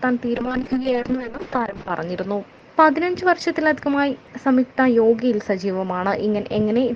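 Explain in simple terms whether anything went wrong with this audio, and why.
A call bitrate drop hits from 0.37 to 1.97 s. The connection's estimate of how much data it could carry fell sharply, so the sound was squeezed into far less data. The encoder coded it much more coarsely and cut everything above about 8 kHz, where the full range had reached about 20 kHz. For roughly one and a half seconds the audio sounds muffled and rough, then the detail returns once the data rate recovers.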